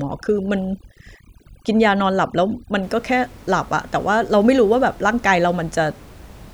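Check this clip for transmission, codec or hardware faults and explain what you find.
One fault appears, overdone noise removal, from 0.0 to 2.83 s, while the room noise sits about 25 dB below the speech. A noise reducer set too hard cuts bands near its noise estimate, leaving twinkling specks in near-silence, unlike codec artefacts, which wouldn't empty the background.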